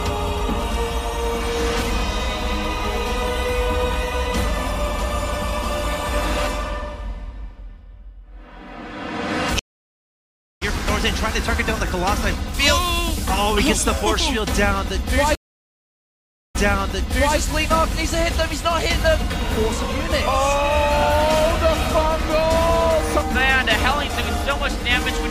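Stream reconnects at 9.59 s and 15.35 s: the connection dropped and a fresh decoder restarted mid-stream. The first gap lasts about a second and resumes roughly 0.7 s later. The second gap lasts 1.2 s and resumes 0.84 s earlier, repeating a resent burst.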